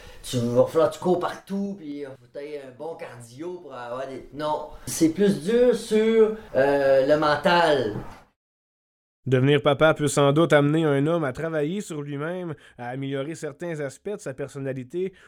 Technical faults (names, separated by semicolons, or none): zipper noise